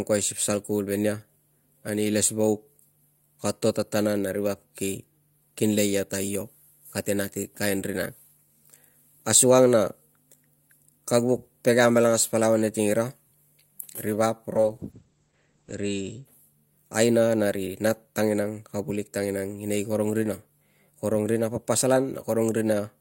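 Speech with a call bitrate drop from 14.56 to 16.31 s. The top end narrows from 20 kHz to 8 kHz and the sound turns rough and watery, worst for 1.16 s, which fits the encoder falling from 48 to 10 kbps. Unlike packet loss, nothing drops out.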